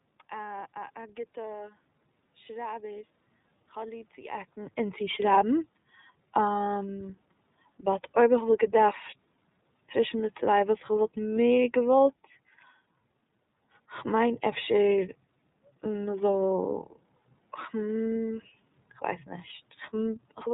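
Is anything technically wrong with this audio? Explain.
Yes. Throughout, the speech passes through the iLBC codec, coding each 30 ms frame independently with nothing above 4 kHz, which leaves it muffled, a little rough and synthetic, consistent with its 13.33 kbps mode. The level shift around 4 seconds and the room noise come from the recording itself.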